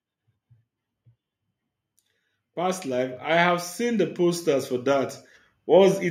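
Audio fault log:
2.54–6.06 s, automatic gain rising: the gain control, reading the input as too quiet, ramps level up about 10 dB, lifting speech and background together.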